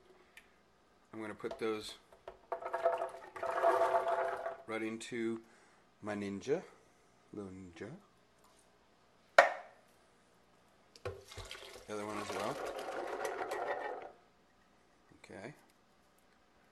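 From 3.16 to 3.48 s, loose connector crackle: a worn contact intermittently breaks the signal path, producing an irregular burst of scratchy crackle.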